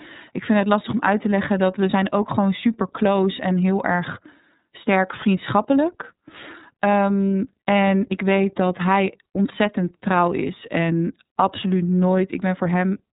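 Throughout, the speech carries the iLBC codec's sound: nothing above 3.8 kHz, and a plainly rough, synthetic texture from coding each 30 ms frame independently, consistent with a 13.33 kbps mode.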